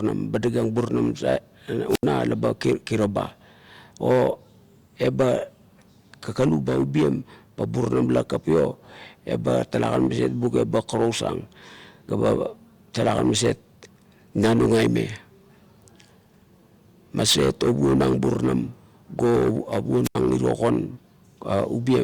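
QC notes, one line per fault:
1.88–2.05 s: wireless microphone squelch dropout. The radio signal fades, hiss rises, then the receiver's squelch mutes the speech for about 77 ms before it returns.
20.04–20.15 s: wireless microphone squelch dropout again. A brief burst of static, then a hole of near silence lasting about 80 ms as the squelch closes.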